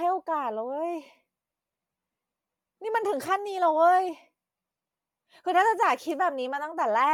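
Bluetooth LC3 compression runs throughout: the speech has a plainly audible breathy, grainy edge, its upper detail swapped for hiss-like texture. The likely cause is LC3 coding zeroing much of the high spectrum and noise-filling it, which fits 48 kbps with 10 ms frames.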